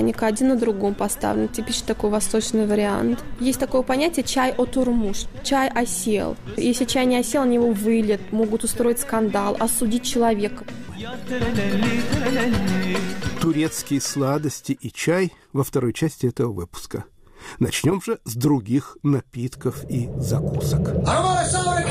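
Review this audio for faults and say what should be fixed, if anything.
Sample clock jitter runs through the whole recording. The converter's clock wanders by something under a microsecond, so each sample is captured a little early or late at random. Because the resulting error scales with how steeply the waveform is changing, it sits roughly 40 dB below the signal, surfacing as a fine hiss or grittiness that thickens on loud and bright passages and disappears when the sound stops. To prevent it, clock the converter from a stable, low-jitter reference rather than a noisy or recovered clock.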